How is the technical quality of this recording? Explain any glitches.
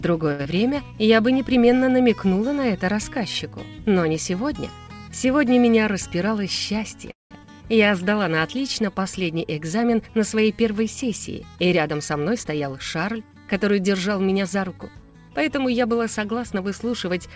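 The recording has several call-transport glitches: two brief disturbances right at the start, one freeze, and three stretches where the audio is hurried along. Throughout, nothing reaches above 8 kHz, which fits a wideband call codec such as G.722 at 64 kbps.

Short stall from a late packet, 0.32 to 0.41 s: a packet was late and the jitter buffer ran dry, so the receiver held the last sound for about 70 ms until the packet arrived. It then resumed from the same point, so nothing is lost. What you hear is a sound lingering too long, with a faint buzz or dip.

Short concealed packet loss, 0.43 to 0.47 s: immediately after the stall, about 40 ms of audio never arrived in time. The receiver bridged the gap by extending what it last had, about 20 ms of synthetic fill, and blended back into real audio. The result is a brief smear or wobble where a short sound can disappear.

Jitter buffer speed-up, 5.92 to 6.93 s, 11.65 to 13.16 s and 14.26 to 15.03 s: each time, the buffer had built up excess audio. 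To cut the delay, the receiver repeatedly cut out tiny pitch-period slices. It removed roughly 70 ms in the first and third stretches and roughly 100 ms in the second. Playback runs at 107%, 107% and 110% of normal speed without a pitch change, so these passages sound rushed.

Call audio freeze, 7.11 to 7.33 s: the sound stalls for about 196 ms. A short continuation of the last sound decays into roughly 170 ms of silence, and then the audio resumes from where it stopped. The likely cause is packets held up in transit emptying the jitter buffer. Almost nothing is missing, but an audible gap is inserted.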